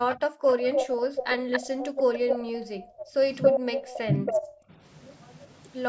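Speech over a call, and you can hear an echo leak, likely from a far end on speakerphone whose canceller let some of its mic pickup through. A faint copy trails by 305 ms at 0.11–0.16 s, then a much stronger one, nearly as loud as the speech, sits 279 ms behind from 0.48 to 2.36 s and again from 3.01 to 4.56 s. The background is gated by the echo canceller too. The room tone gets clamped while the loudspeaker path is active, dropping by about 40 dB at 0.27–0.46 s and by about 21 dB at 2.36–3.01 s and 4.57–4.70 s, then coming back each time. There's also speech suppressed in double talk, where the canceller seemingly can't tell the talker from the echo and pulls both down. The voice dips slightly at 3.42–3.53 s and more noticeably at 4.05–4.29 s, while the band topping out at 8 kHz is just the normal call mic processing.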